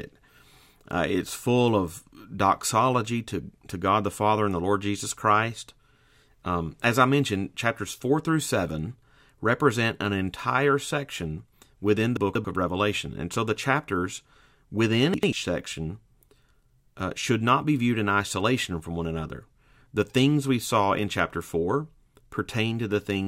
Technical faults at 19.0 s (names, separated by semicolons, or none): none